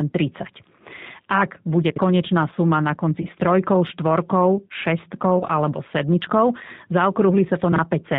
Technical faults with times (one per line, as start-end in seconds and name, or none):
0.00-8.18 G.729 codec
1.90-1.98 chunks out of order
3.22-3.26 VoIP packet loss concealed by the speech codec
5.39-5.44 VoIP packet loss concealed by the speech codec
7.72-7.78 chunks out of order